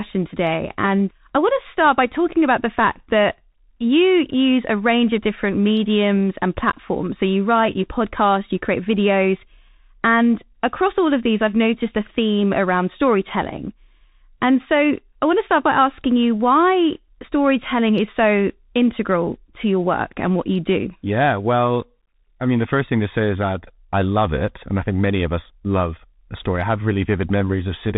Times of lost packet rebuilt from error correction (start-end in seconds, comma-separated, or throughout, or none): none